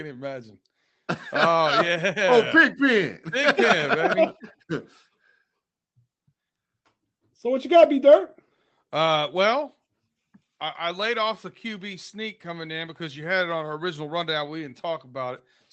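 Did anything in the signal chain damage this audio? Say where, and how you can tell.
No, nothing in the signal chain damaged this speech. It went through a normal call path, where the top end stops at about 8 kHz, which fits an Opus codec at a modest bitrate in wideband mode.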